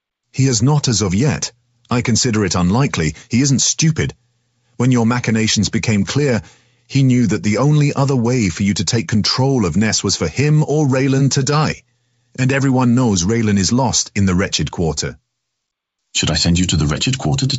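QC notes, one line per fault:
The speech comes through G.722 wideband telephone coding at 64 kbit/s, reaching up to about 7 kHz with any coding effect no more than faint, and nothing in the signal calls for a fault entry.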